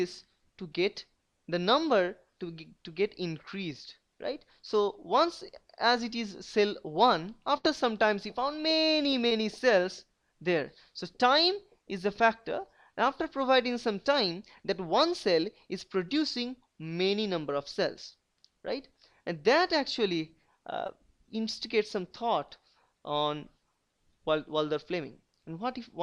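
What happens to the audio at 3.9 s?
Nothing goes wrong at 3.9 s; the audio plays through that moment intact, with no dropout, glitch or distortion.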